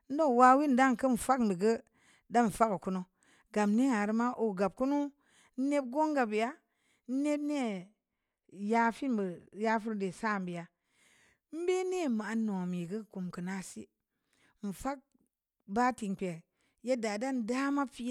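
From 7.62 s to 10.84 s the speech turns dull and muffled, as if heard through a layer of cloth, before clearing again. This is de-emphasis applied wrongly: a treble-cutting filter meant to reverse pre-emphasis was applied to audio that had none, or applied a second time. The result is a smooth downward slope in the response, with 10 kHz sitting about 8 dB below 1 kHz, which strips away the crisp upper detail.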